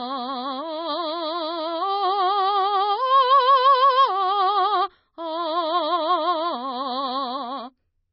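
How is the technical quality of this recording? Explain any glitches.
The technical quality is poor, with heavy damage running through the whole music clip. From start to finish the treble is gone, with nothing above about 5.9 kHz. The sound is watery and swirly, with metallic chirps and smeared attacks. The likely cause is MP3 compression at a very low bitrate, which fits roughly 24 kbps. Starved of bits, the encoder cuts the top band at a fixed frequency. It also drops weak frequency lines, and these flicker on and off between frames.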